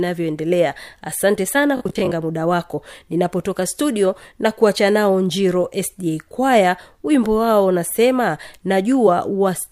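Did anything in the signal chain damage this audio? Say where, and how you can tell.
Yes. Robotic sound from repeated short buffers at 1.77 to 2.13 s: the speech turns into a rigid 50 Hz metallic buzz that loosely follows the syllables. The likely cause is a driver-buffer underrun that replays 20 ms blocks while real audio is skipped, with roughly 40 percent of the stretch repeated.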